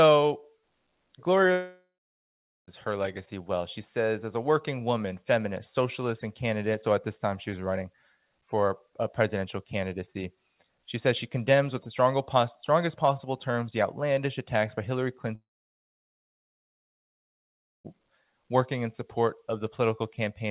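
At 1.52 s the sound stops and the last fragment is stretched into a fading buzz. About 0.78 s of near-silence follows, and the sound returns at 2.69 s with roughly 1.16 s missing. The same happens from 15.35 to 17.86 s: a brief tail, then about 2.4 s of silence, with 2.5 s lost. Both gaps are likely a long network dropout, with the receiver concealing and then muting. The band stays capped at 4 kHz, consistent with a G.711 A-law call path.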